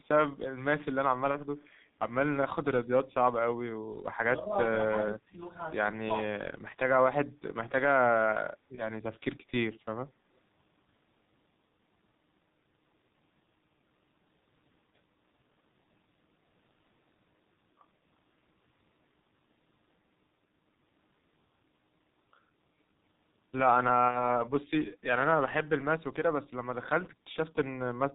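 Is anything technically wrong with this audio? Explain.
Yes, there are several problems. Throughout, the speech has gone through the G.723.1 codec at about 6.3 kbit/s, heavily damaged: muffled, hoarse, nothing above 4 kHz, and the consonants are smeared by its slow model updates.

There's VoIP packet loss concealed by the speech codec at 1.31–1.41 s, 8.75–8.89 s and 24.08–24.34 s. The decoder papers over 30, 30 and 60 ms gaps by extrapolating from its last frame, so you hear a short stretched, fading sound, buzzy or noisy, that stays weak a little after the audio returns.

At 1.57–1.65 s there's a faint delayed copy of the voice, around 150 ms late and roughly 40 dB down, likely an echo leak from a far-end loudspeaker getting past the echo canceller.

Speech dips at 4.26–4.52 s by about 5 dB, at 4.85–5.39 s by about 15 dB, and at 6.03–6.09 s by about 20 dB. That's likely speech suppressed in double talk, where the echo canceller turns down both its own talker and the loudspeaker echo while both sides talk.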